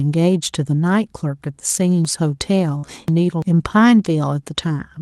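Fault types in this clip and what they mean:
Chunks out of order: a 341 ms chunk plays three chunks late, so the speech jumbles between 2.05 and 3.42 s.
Burst of packet loss: around 2.77 to 2.87 s about 60 ms goes missing, covered by the last sound held and faded before speech resumes.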